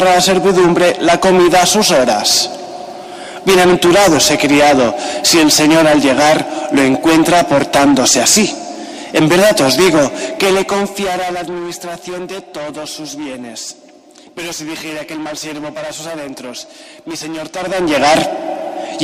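Nothing stood out as a technical problem on listening.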